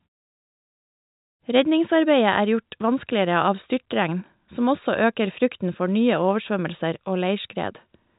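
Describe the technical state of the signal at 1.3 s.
At 1.3 s the signal is intact, with the G.711 telephone band limited to about 3.8 kHz as that coding is designed to do.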